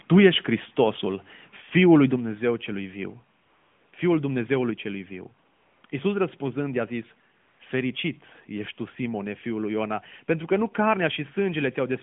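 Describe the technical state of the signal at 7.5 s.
AMR comfort noise runs from 7.40 to 7.60 s. The phone judged the sound silent and stopped sending speech frames for 200 ms, and the receiver filled the gap with synthetic noise from a coarse level-and-spectrum estimate. Unlike a dropout, this gap isn't silent: a smooth, steady hiss switches abruptly in and out.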